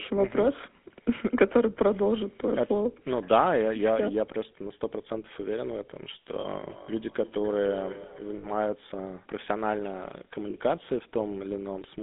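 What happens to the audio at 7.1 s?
At 7.1 s the speech is inside a burst of feedback echo between two devices, running from 6.69 to 8.68 s. A second device in the same room plays back what the first one sent, and that microphone picks it up again. Its echo canceller can't remove sound it didn't play itself. So the speech comes round again roughly every 300 ms. The repeats are thinner and ringing, peaking at about 16 dB below the direct speech.

Under the echo, the whole clip carries GSM full-rate codec damage. The codec models the vocal tract and drives it with a sparse pulse train that keeps only a fraction of the excitation. That gives the speech a plainly audible buzzy, gravelly roughness. The band runs from about 200 Hz to 3.6 kHz, so there is nothing above that. The coarseness fits a 13 kbps full-rate stream.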